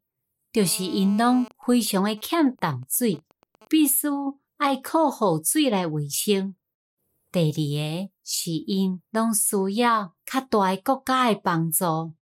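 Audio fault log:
0.60–1.48 s, GSM phone buzz: a steady, raspy 217 Hz buzz, about 21 dB below the speech. A nearby phone's call transmissions are rectified by the audio circuitry.
1.51–3.80 s, GSM signalling bursts: faint even ticks with a longer 217 Hz buzz twice a second before "须爱靠雨". The phone sends only occasional burst groups while its user is silent.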